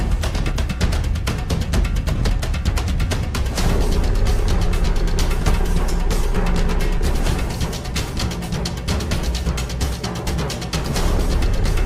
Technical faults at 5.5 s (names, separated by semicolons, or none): frames out of order